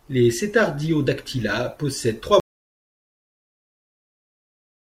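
At 2.4 s the speech cuts off abruptly, and an audio dropout to silence runs to the end of the clip. The input was likely lost while recording carried on. Unlike a fade-out or a closing noise gate, nothing tapers and no room tone remains.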